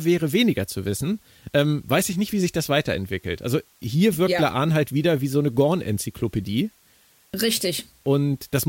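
A steady, even hiss sits under the speech from start to finish, roughly 35 dB below the level of the speaking, with no crackle, grit or distortion riding on the words themselves. That pattern marks low bit depth with dither: the signal was rounded to very few levels, which fits a 9-bit signal, and random dither added before rounding turned what would have been harsh quantisation distortion into a constant white-noise floor.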